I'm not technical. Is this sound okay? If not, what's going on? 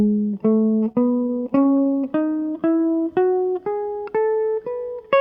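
No. Between about 0.85 and 2.04 seconds the music stutters: it catches and hesitates 14 times in quick succession, each hiccup no longer than about 27 ms, so that stretch feels dragged and uneven. These are repeated stalls (stutter). The audio data arrived late, so the player kept running out of sound and briefly stretched the last bit it had while waiting. Nothing is lost, but about a sixth of that stretch is filler.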